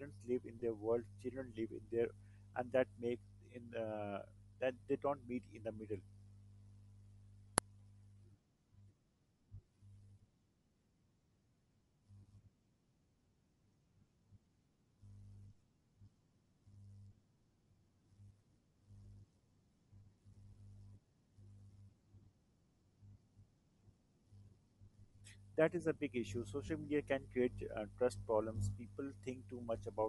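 Throughout the speech, the upper band sounds breathy and grainy, with noise filling in where detail should be. This is likely Bluetooth LC3 compression at a low rate, which fits roughly 48 kbps in 10 ms frames, rather than broadband hiss.

At 0.60 s, between "live in" and "world children live in", and again at 26.67 s, between "is a big issue" and "media can", there are lost LE Audio frames. Each gap is about 20 ms, which fits two frames. The decoder repeats the last spectrum with scrambled phase, so the sound smears briefly instead of dropping to silence as a plain dropout would.

At 7.58 s an uninitialised buffer produces a sudden, loud crack lasting about 0.73 ms, which fits a 32-sample block.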